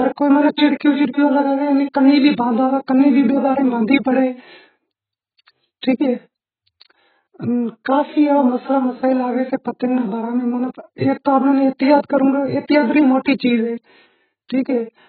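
From start to finish the speech sounds dull and smeared, with nothing above about 4.7 kHz, and sibilants and held vowels carry a fizzy, warbling texture. This is likely AAC compression, AAC-LC run at a very low bitrate, roughly in the region of 11 kbps. Starved of bits, the encoder pulled its cut-off down and coarsely quantised the remaining frequency lines, leaving gaps or noise-filled bands that smear and swirl the detail.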